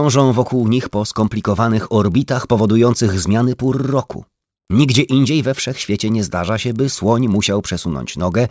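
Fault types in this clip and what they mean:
Resampler restarted on every block: the rate converter was reset at every 40 ms block, so each block edge was computed without its true neighbouring samples, which fits a conversion from 24 kHz to 16 kHz. Those edge errors repeat at 25 Hz, giving a steady ticking buzz wherever sound is present.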